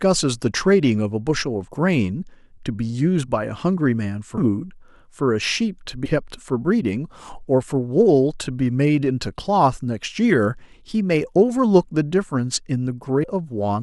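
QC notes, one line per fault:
4.37, 6.05–6.10 and 13.23–13.25 s: compressed frames skipped. The speech jumps ahead, losing about 300 ms at 4.37 and 13.23 s and about a tenth of a second at 6.05 s. Whole frames were missing or rejected by the decoder.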